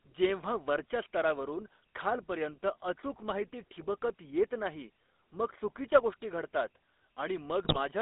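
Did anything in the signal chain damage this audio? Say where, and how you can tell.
Yes. The damage comes from the codec stage and from the radio link that carried its bitstream.

Throughout the clip the speech is squeezed into a band of roughly 250 Hz to 3.6 kHz and carries a steady buzzy, gravelly roughness. That is the GSM full-rate codec, which fits a 13 kbps full-rate encoder. It rebuilds the voice from a vocal-tract filter driven by coarsely spaced excitation pulses, and those pulses produce the grit. A plain narrowband telephone line would limit the band the same way but would stay clean, without this rasp.

From 7.64 to 7.77 s the speech breaks into squawks and gargling, and the level lurches. These are GSM bit errors from a weak link. The 0.13 s span points to about six consecutive 20 ms frames, with a heavy error rate of around 5 percent. Corrupted filter, pitch and gain parameters bend the spectrum and inflate the level frame by frame. 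Packet loss would sound different: it leaves smooth gaps or repeated sound rather than distorted bursts.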